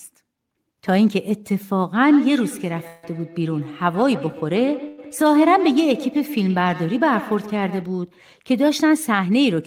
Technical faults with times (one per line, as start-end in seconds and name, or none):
2.07-7.97 feedback echo between two devices
2.87-3.05 call audio freeze
4.88-5.00 call audio freeze